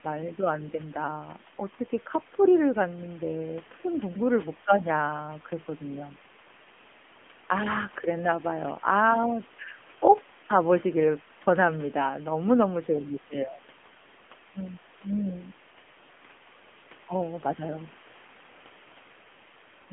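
From start to finish the speech sounds thin, boxy and buzzy, with a synthetic edge and nothing heard above about 3.6 kHz, and the low end gives out near 200 Hz. This is the AMR narrowband mobile codec at work: the signal passes through a 200 Hz to 3.4 kHz phone band and is rebuilt from a vocal-tract model fed by sparse pulses. The plainly audible damage fits a low mode of around 8 kbps. The room noise sits about 22 dB beneath the speech.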